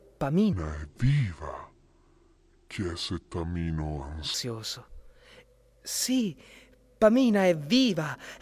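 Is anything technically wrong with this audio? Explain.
Yes. A wrong sample rate affects the speech from 0.53 s to 4.34 s. The samples are played back more slowly than they were captured, with no rate conversion. The ratio is two thirds, which fits 48 kHz material played at 32 kHz. Speed and pitch fall together. The speech runs at 0.667 times normal pace and drops by about 7 semitones, roughly a musical fifth. The voice sounds deep, heavy and dragged out.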